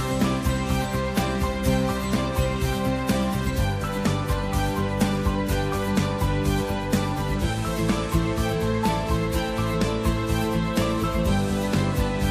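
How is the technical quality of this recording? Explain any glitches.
No glitches: nothing in the recording points to a technical fault.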